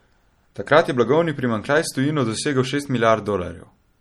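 Throughout the speech, a watery, swirling texture with a dulled top end points to likely MP3 compression at a low bitrate near 48 kbps; a spectrogram would show a flat treble cut-off and flickering high-frequency patches.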